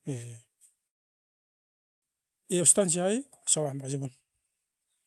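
From 0.87 to 2.06 s a gap, likely a long network dropout, leaves a brief fading buzz, then near-silence: a blank spectrogram band and flat waveform before speech resumes with material missing. Right after, from 2.13 to 3.16 s (113% speed) and 3.58 to 5.03 s (111%), jitter buffer speed-up trims tiny pitch-period slices, about 150 ms each time. Speech sounds hurried at unchanged pitch, with compressed syllable spacing and harmonics that stay level. Throughout, content above 12 kHz is absent from the spectrogram.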